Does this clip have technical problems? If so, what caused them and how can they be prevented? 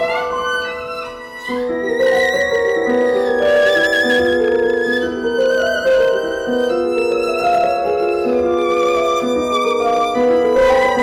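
Yes. Hard clipping runs throughout: the signal is driven roughly 8 dB past what the stage can pass, so a few percent of samples hit the ceiling and are cut flat, adding high harmonics heard as harsh fuzz on louder sounds. Reducing gain before conversion, leaving several decibels of headroom, prevents it.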